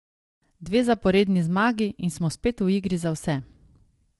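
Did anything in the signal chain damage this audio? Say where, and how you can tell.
Yes. The damage sits at the codec stage and runs the whole way through the speech: it was likely encoded with low-delay AAC compression of the AAC-ELD kind, at a rate that sounds like about 32 kbps. At that low bitrate its coarse quantization can't code the pitch harmonics cleanly, so the voice comes out rough and grainy, with noise filling the gaps between harmonics. Nothing survives above 11.6 kHz, so the top band ends abruptly.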